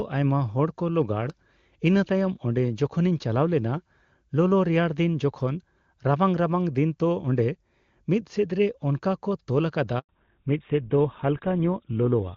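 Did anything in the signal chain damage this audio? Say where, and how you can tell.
Yes. At the network stage there is a handover gap from 9.99 to 10.09 s: the speech dies away within a few tens of milliseconds and the gap stays in dead silence until sound resumes, 100 ms in all. That is the call being moved between networks with no speech frames arriving during the switch, so whatever was said in that window is gone. On the waveform it appears as an abrupt flat line; on a spectrogram, a clean vertical blank band across all frequencies.

From 10.09 s to the end there is a fallback to narrowband. Before the gap the wideband path sounds clean, with energy reaching up toward 7 kHz, consistent with HD Voice at a high rate such as 23.85 kbit/s. Afterwards nothing is present above 4 kHz, and the speech turns duller and rougher. The texture suggests the call dropped to an older codec, most like GSM full rate. 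On a spectrogram the upper band vanishes at 10.09 s, leaving a hard ceiling at 4 kHz.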